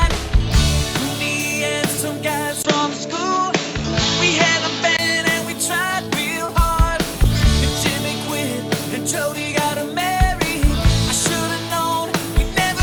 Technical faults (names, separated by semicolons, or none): input switched to a poorer device; short concealed packet loss